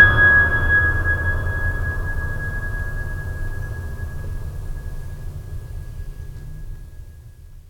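Music clip, no faults heard.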